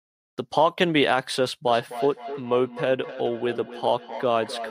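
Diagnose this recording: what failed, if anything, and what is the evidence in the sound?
Feedback echo between two devices, a call-processing failure, starts at 1.67 s and lasts to the end at 4.7 s. Each phrase returns roughly every 300 ms, peaking about 12 dB below the direct speech. A second device's playback re-enters a microphone whose echo canceller ignores it. A spectrogram shows evenly spaced copies of each syllable trailing it.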